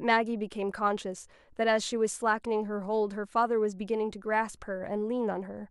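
No technical faults can be heard in this speech recording.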